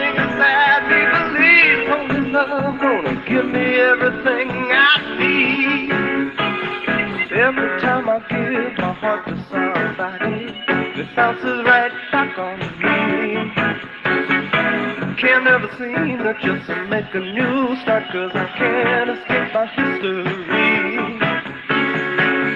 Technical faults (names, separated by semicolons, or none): none